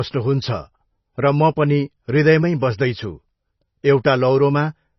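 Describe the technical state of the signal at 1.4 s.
At 1.4 s the speech carries heavy coding damage, likely MP3 compression, present across the whole clip. The encoder has cut everything above 5.9 kHz and drops weak frequency lines frame to frame, giving a dull, watery swirl that points to a very low bitrate near 24 kbps.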